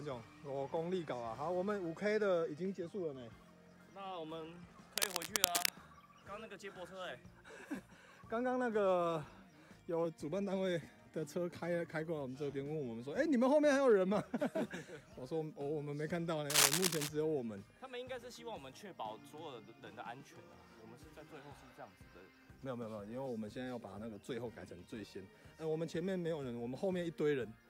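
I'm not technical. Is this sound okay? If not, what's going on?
No. Twice, a worn cable or connector was likely being moved, so its electrical contact kept breaking and remaking. That cable scratch noise comes through as a harsh scratching rustle, louder than the sound itself, from 4.97 to 5.70 seconds and from 16.50 to 17.09 seconds.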